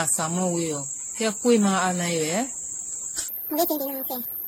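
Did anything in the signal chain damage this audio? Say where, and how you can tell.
Yes. The codec stage has left generation loss across the whole speech clip. The sound is swirly, smeared and hollow, and consonant attacks blur. The damage goes beyond what one lossy pass at these rates would cause. It likely comes from repeated AAC-LC decoding and re-encoding, around ten passes at 64 to 93 kbit/s. Each pass quantises on a shifted frame grid, so the noise and the spectral holes pile up.

There is also a section at the wrong speed, at the playback or editing stage. From 3.28 s to the end at 4.48 s, the speech turns high and hurried. It runs 1.73 times too fast, which lifts the pitch by about ten semitones. Speed and pitch jump together at that moment, so no pitch-preserving stretch was applied. The likely cause is that this stretch was played or conformed against the wrong clock.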